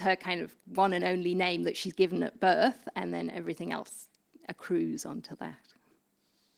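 Speech clip with no technical faults; the Opus voice compression runs as expected, with full bandwidth and only light coding damage.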